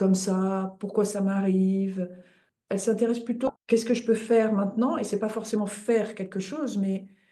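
At about 3.47 s there's a skip ahead: roughly 0.7 s of audio just isn't there, dropped on the way or when an overflowing jitter buffer threw it out while later audio was already waiting. The two sides butt together with no gap, so it lurches forward.

Right after, from 3.57 s to 7.12 s, a jitter buffer speed-up kicks in. The buffer was still holding more than its target, so the receiver kept trimming tiny pitch-period-sized slices, around a third of a second in total. Everything runs about 7% fast at unchanged pitch, sounding a bit rushed.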